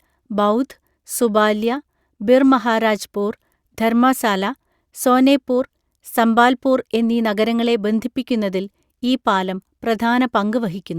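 Nothing in the speech stood out as a technical problem on listening.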